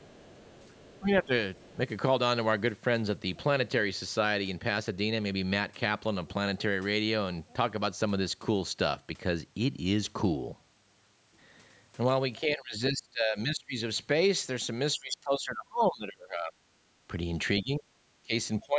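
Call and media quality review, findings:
Other side's voice leaking through, 0.0–0.99 s and 1.55–1.73 s: faint second voice about 30 dB under the talker, likely residual loudspeaker echo, not crosstalk, since it precedes each dip.

Speech suppressed in double talk, 0.99–1.31, 1.73–1.79, 12.4–13.76, 14.94–16.6, 17.63–17.85, 18.24 s to end: talker drops roughly 10–25 dB in overlap, likely echo canceller ducking, not dropout, because the level dips rather than going silent.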